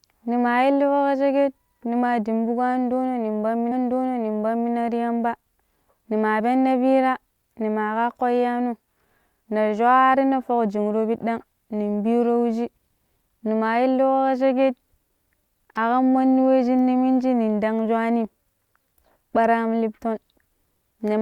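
Speech, and at 3.71 s a stretch of the programme plays a second time: a small blip marks the jump back, then the same second of audio from 3.71 s to 4.71 s is heard again before the talk carries on, adding 1.0 s to the running time. This is a stream segment repeated fault, where the player fetched or queued the same chunk of the stream twice and played both copies in sequence.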